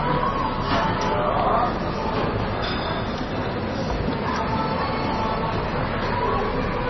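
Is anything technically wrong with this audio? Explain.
Yes. Throughout, the sound shows heavy damage typical of MP3 compression: nothing survives above 5.9 kHz, and what remains has a watery, swirling quality with smeared attacks. The likely cause is an encoder starved of bits, which fits a very low rate near 24 kbps. It cuts the treble at a fixed point and drops weak frequency lines that flicker in and out between frames. That flickering swirl is what sets it apart from a plain low-pass filter, which would only dull the top without the watery artefacts.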